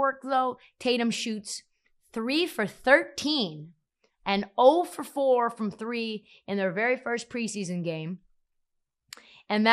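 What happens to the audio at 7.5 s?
At 7.5 s the speech has the same dull, gurgling, granular character it has for the whole clip. This is likely MP2 compression at a low rate, which fits roughly 80 kbps. Short of bits, the coder shuts off upper sub-bands and coarsely quantises the rest, so the top end drops in and out. A plain low-pass filter would dull the sound steadily, but here the bands flicker and the grain moves with the signal.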